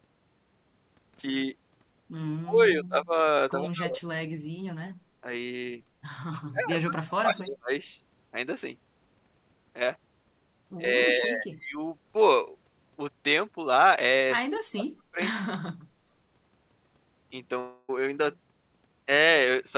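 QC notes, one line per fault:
2.35–3.16, 3.62–4.07, 6.49–6.64, 6.82–7.71, 10.83–11.81 s, speech suppressed in double talk: the level dips by about 20 to 40 dB or breaks into pieces, likely because the echo canceller mistook overlapping talk for echo.
14.45–14.58 s, echo leak: a faint delayed copy trails the sound by 121 ms at about 15 dB below it, likely residual loudspeaker pickup the echo canceller missed.
14.48–15.19, 15.40–15.56 s, speech suppressed in double talk: the sound again drops by about 35 dB in chunks, likely the canceller clamping down during simultaneous talk.
17.60–17.90 s, long network dropout: the last sound is smeared into a fading buzz for about 280 ms, then audio resumes with that stretch gone, likely lost packets concealed by the receiver.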